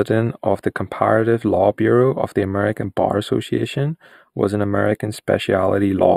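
Speech running through the whole clip carries channel delay (comb filtering): one channel trails the other by only a few samples, well under a tenth of a millisecond, and summing them to mono cancels shared content at evenly spaced frequencies. With such a tiny offset, the first notch falls near 7 kHz, so the top end sounds dull and slightly hollow. Unlike a plain low-pass roll-off, the loss is a fixed notch pattern, and unlike flanging it never sweeps.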